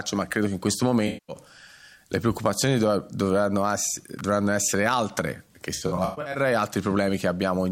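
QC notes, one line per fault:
1.07–1.36 s, AAC frame loss with concealment: a block of compressed frames, about 213 ms worth, never reached the decoder, so it rebuilt the gap from the last good spectrum. That synthetic fill shows up as a smeared, noisy and phasey patch lasting about 0.3 s.
4.19 s, electrical switching spike: a sharp snap lands on top of the sound, lasting well under 20 ms. Its tight, clicky attack, independent of the audio around it, points to interference picked up on the line, likely an arc from a nearby switch, motor or static discharge.
5.74–6.38 s, AAC frame loss with concealment: losses come in scattered bursts totalling about 320 ms across roughly 0.6 s, the longest run around 150 ms. Each gap is filled from stale spectral data with randomised detail, so this stretch turns intermittently smeared and hashy, breaking up repeatedly.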